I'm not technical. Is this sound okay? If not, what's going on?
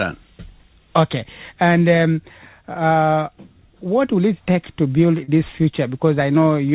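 No. Around 5.24 to 5.30 s the sound briefly smears: a short concealed packet loss, where about 40 ms of audio arrived late and was patched by continuing the preceding sound.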